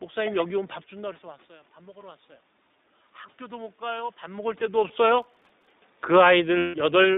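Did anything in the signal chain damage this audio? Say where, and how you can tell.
Yes. The codec stage shapes the whole clip: this is iLBC, with the speech held to a 200 Hz to 3.7 kHz line band and the slightly rough, synthetic texture of frame-by-frame excitation coding. The damage is plainly audible rather than subtle. The framing fits 20 ms frames, and the density of detail points to the 15.2 kbps mode. Each frame is coded without reference to the previous one, which matters for how the losses below recover.

In call processing, automatic gain rising shows from 0.98 to 2.3 s. The input level dropped by about 16 dB, and the gain controller answered by climbing about 3 dB over that stretch. Speech and room noise swell together, which is what separates this from a talker changing distance. The level shifts near 0.5 s and 4.0 s are the talker moving and are not part of this.

At the network stage there are two sets of lost iLBC frames. 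A single 20 ms frame goes missing at 4.88 s. A longer loss of 160 ms runs from 6.58 to 6.76 s, which fits eight consecutive frames. In each gap the decoder repeats the last pitch cycle mixed with noise, heard as a held, buzzy vowel that fades through the longer gap. Clean speech returns immediately afterwards because the frames stand alone.

At the driver and buffer stage, processor overload crackle runs from 5.22 to 5.70 s. Roughly thirty tiny buffers, each around a millisecond and a half, missed their deadline and were filled with silence. The hard-edged dropouts stack into a gritty, tearing crackle over the speech, and it stops as soon as the load clears.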